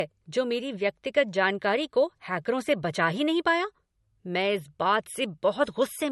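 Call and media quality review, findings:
Speech, throughout: nothing above 11.9 kHz, with low-bitrate MP3 artefacts, yet the file is carried at a high bitrate. Likely low-bitrate audio saved at a high bitrate: an early MP3 stage around 50 kbit/s set the cut-off and artefacts, and re-encoding couldn't restore what it removed. Unlike a plain low-bitrate encode, the high-bitrate re-encode adds nothing audible.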